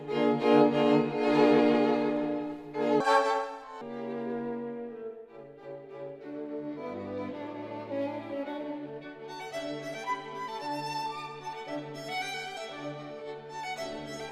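A section at the wrong speed runs from 3.00 to 3.81 s, where the audio plays 1.87 times too fast, so its pitch jumps up by roughly ten semitones and it sounds high and hurried. This is likely a playback or editing clock mismatch on that segment.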